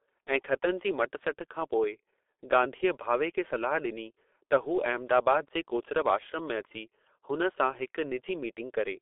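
From start to finish the speech carries heavy G.723.1 codec damage: nothing above 3.8 kHz, a line band of roughly 300 Hz to 3.6 kHz, and a muffled, hoarse texture with smeared consonants. Unlike simple telephone band-limiting, the coarse frame-by-frame voice modelling fits a 6.3 kbit/s stream.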